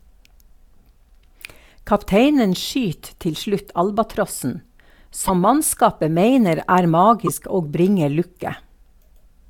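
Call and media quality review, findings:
Likely broken MP3 bit reservoir: after a cut in the stream, the next frame reaches back for borrowed bits and decodes another frame's bytes. Speech skips ahead with a short chirp, noise burst or gap, 5.27–5.30 s and 7.26–7.29 s, each about one 24 ms frame long.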